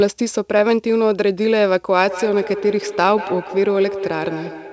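From 2.0 s to the end at 4.7 s, the speech suffers feedback echo between two devices: a second device in the room replays the call audio, this microphone picks it up, and no echo canceller here can remove sound it did not play itself. Each syllable returns roughly a fifth of a second later, thinner and more metallic, peaking at about 10 dB below the direct speech. On a spectrogram, a delayed copy trails each syllable beneath the 8 kHz ceiling of the call path.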